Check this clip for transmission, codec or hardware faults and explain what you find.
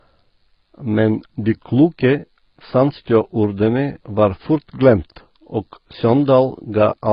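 There is one fault, and it runs through the whole clip: AAC compression. The speech is dull and smeared, with a warbling, fizzy edge on sibilants. On a spectrogram, energy stops sharply at 5.1 kHz. The likely cause is heavy AAC-LC quantisation at a very low bitrate, consistent with about 16 kbps.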